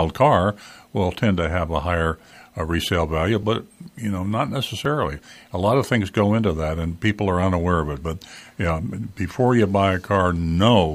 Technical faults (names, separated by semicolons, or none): dropped buffer (overrun)